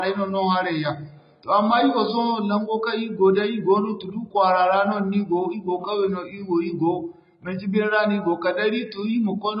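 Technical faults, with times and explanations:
Throughout, AAC compression: the speech has nothing above about 5 kHz, so it sounds dull and boxed-in, with the sibilants thinned to a fizzy, smeared hiss and a warbling texture on sustained vowels. The damage is heavy and points to a very low bitrate, on the order of 16 kbps. The likely cause is AAC-LC coding that spent its few bits on the low bands, dropped the top of the spectrum and quantised the rest coarsely.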